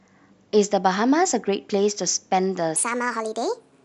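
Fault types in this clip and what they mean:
Section at the wrong speed: from 2.76 s to the end the speech runs 1.38 times fast, about five semitones higher, likely from playback against the wrong clock.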